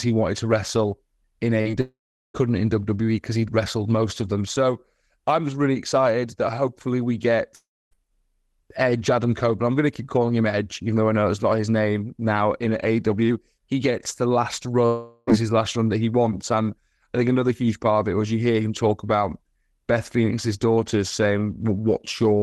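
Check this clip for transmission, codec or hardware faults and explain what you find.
The speech in this clip has two kinds of fault: short concealed packet losses near the start and three longer network dropouts. It has passed through a call codec whose band-limited sound, topping out around 12 kHz, points to Opus.

Short concealed packet loss, at 1.61 to 1.67 s and 1.71 to 1.75 s, just after "wanted to wrestle in". About 40 ms and then 20 ms of audio arrived too late, and the receiver patched each gap by extending the preceding sound, so the speech briefly smears and wobbles.

Long network dropout, at 1.81 to 2.36 s, 7.56 to 8.05 s, and 14.86 to 15.33 s between "gets the last" and "his last run that". These are likely lost stretches of roughly half a second, 0.36 s and 0.42 s. At each one, a fading synthetic continuation stands in for the missing audio, leaving about 0.38 s and 0.26 s of silence in the first two. 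The third is bridged with no silence.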